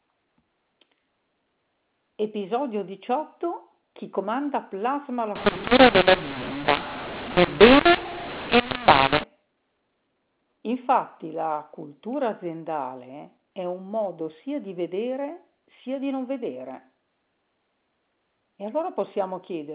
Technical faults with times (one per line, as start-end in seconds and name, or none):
5.35-9.24 mu-law and A-law mixed up